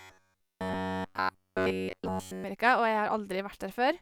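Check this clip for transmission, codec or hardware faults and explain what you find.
One fault stands out: robotic sound from repeated short buffers, running from 0.01 s to 2.44 s. Fresh audio is likely arriving too slowly, so playback keeps recycling the last fragment of roughly 10.7 ms while the real speech in between is dropped; throughout that stretch essentially everything heard is repetition. Looping a fragment that short imposes a fixed 93.8 Hz buzz, turning the speech into a rigid, metallic buzz that only loosely tracks its rhythm.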